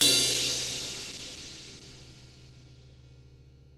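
From 0.32 s to the end, a call bitrate drop takes the encoder from 64 to 13 kbps, bottoming out for about 1.5 s. The sound turns coarse, watery and dull as the highs vanish, yet it stays unbroken, unlike packet-loss dropouts.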